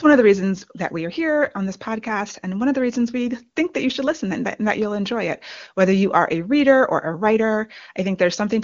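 Nothing here points to a technical fault: the speech comes across the way a wideband HD Voice call at about 23.85 kbit/s should, with the top of the sound simply stopping at around 7.2 kHz.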